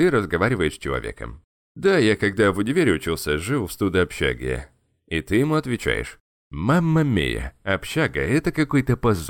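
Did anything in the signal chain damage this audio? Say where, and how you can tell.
No, nothing in the signal chain damaged this audio.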